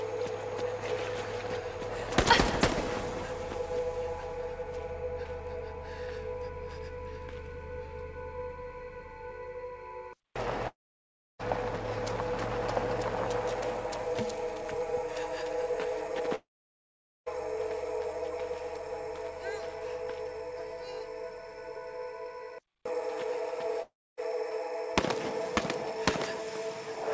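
At 10.68 s the sound breaks off until 11.42 s. A short tail of the last sound carries on and fades. Then about 0.66 s of silence follows. The same happens from 16.35 to 17.29 s, with about 0.84 s of silence, and from 23.82 to 24.20 s, with about 0.28 s. The likely cause is a long network dropout. Audio stopped arriving, and the receiver stretched the last sound before going quiet. When audio resumes, the lost stretch is simply gone: 0.72 s, 0.92 s and 0.36 s. The call path's G.722 coding leaves nothing above 8 kHz throughout.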